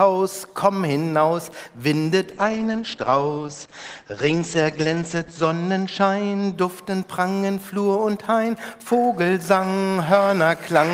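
From 2.3 to 6.59 s a call bitrate drop pulls the encoder from 32 to 10 kbps for about 3.2 s, so bandwidth shrinks from 20 kHz to 8 kHz and the sound turns muffled and coarse.

Between 7.63 and 9.76 s, GSM signalling bursts from a nearby 2G phone are rectified into galloping ticks and short 217 Hz buzzes, roughly 25 dB below the signal.

From 9.98 to 10.91 s a GSM phone buzz from a phone in a call adds a steady, harsh 217 Hz rasp with many harmonics, about 27 dB below the signal.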